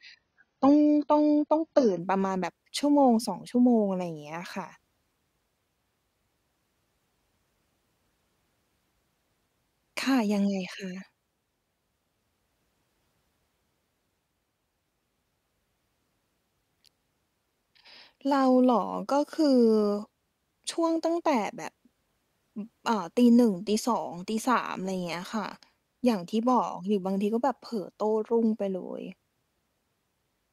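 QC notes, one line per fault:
0.0–2.0 s, adaptive stream starting at a low bitrate. The first two seconds have nothing above 6.6 kHz and stronger codec artefacts, which fits AAC at 16 kbit/s. Quality then jumps suddenly, with no gap, as the player switches up, pointing to 96 kbit/s.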